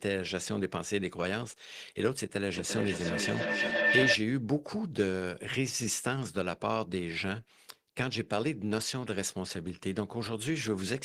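Feedback howl runs from 2.52 to 4.25 s in this speech clip. Two devices on the same call are sharing a room, so the loudspeaker's output re-enters the microphone and each pass around the loop comes back louder. The repeats swell rather than die away and narrow to a shrill tone near 2 kHz, with the loop coming round roughly every third of a second, and peak at about 4 dB above the speech before the howl cuts off.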